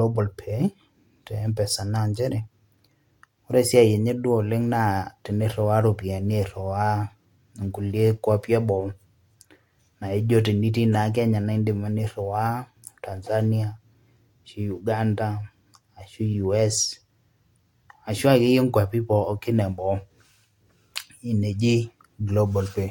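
No technical faults are audible anywhere in the speech recording.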